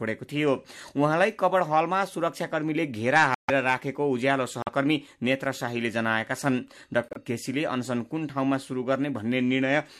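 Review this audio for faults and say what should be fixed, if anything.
Three spots where the speech drops to dead silence: 3.35 to 3.50 s, 4.62 to 4.69 s, and 7.09 to 7.17 s. That's corrupt frames being muted. Damaged compressed frames got rejected by the decoder, and the player filled those gaps with silence, so each hole starts abruptly but the timing holds. The longest gap, around 0.16 s, points to several frames lost together. Adding error protection or checksums on the transport, plus packet-loss concealment in the decoder, would fix it.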